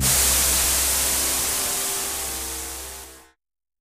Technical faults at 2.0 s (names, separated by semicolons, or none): dropped buffer (overrun)